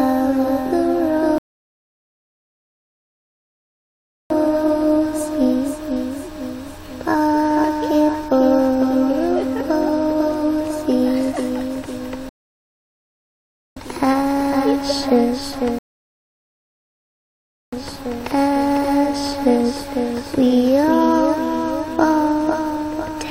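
At 1.38 s, 12.29 s and 15.79 s the sound halts in rebuffering stalls, adding about 2.9, 1.5 and 1.9 s of silence. The player ran dry of downloaded audio. Unlike a dropout, playback resumes exactly where it stopped, with nothing skipped.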